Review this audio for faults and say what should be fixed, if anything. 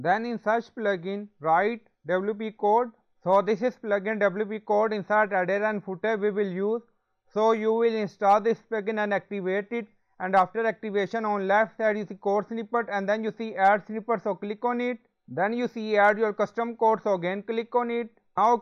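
Brief crackles sit on the loudest peaks at 3.33–3.37 s, 8.29–8.34 s, 10.37–10.42 s, 13.65–13.70 s, 16.00–16.10 s and 18.45 s. This is hard clipping: peaks overshoot the ceiling by about 1 to 2 dB and are sliced flat, spraying high harmonics. To prevent it, lower the gain before the overloading stage or add a few decibels of headroom.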